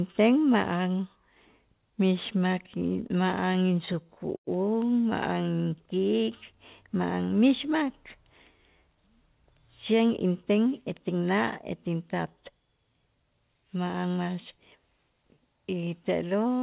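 From 2.8 to 4.49 s you get repeated stalls (stutter): the jitter buffer kept running dry, so the speech hitches about 17 times, stretched by held-over sound.

Then from 5.33 to 6.53 s there's a jitter buffer slow-down. Repeated pitch periods add 142 ms, so the speech drags at 89% speed without any pitch drop.

Finally, 8.88 to 11.38 s is a jitter buffer speed-up. About 150 ms gets trimmed out to cut the delay, so the speech sounds a bit hurried at 106% speed, over the call path's narrowband sound that stops at 4 kHz.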